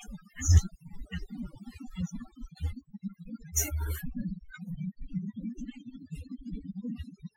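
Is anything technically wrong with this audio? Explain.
Yes. Overdone noise removal runs through the whole clip: bands near the noise estimate are pulled far down, taking quiet speech detail with them. Gaps fall to near silence with twinkling specks, and a spectrogram shows scattered isolated bright dots against an empty background.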